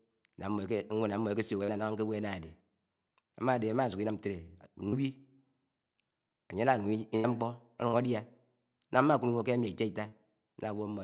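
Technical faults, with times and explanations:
1.64 s, 4.88 s, 7.88 s and 10.08 s: short concealed packet loss. Each time roughly 40 ms of the call didn't reach the decoder in time, and the receiver filled the hole by extending whatever sound was playing, carrying on its pitch if voiced or as shaped noise if not, before easing back into real audio. You hear a quick smear or little wobble at each spot, and a short sound there can just disappear.
7.16 to 7.27 s: burst of packet loss. Here about 80 ms went missing in one run, which points to a few consecutive packets dropped or arriving too late. The receiver stretched the last sound and let it fade as the gap went on, so you get a brief held buzz or dying hiss, then the audio picks up further along with that stretch skipped. You can hear the narrow band of the call path, nothing above 4 kHz, which fits G.711 mu-law.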